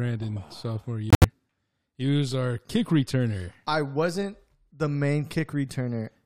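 At 1.10 s the speech drops abruptly into silence for about 0.14 s, ending at 1.24 s. This is a corrupt frame muted fault. Damaged compressed frames were rejected by the decoder and replaced with silence, a gap consistent with a short run of consecutive codec frames. Timing is preserved, so the speech resumes in place.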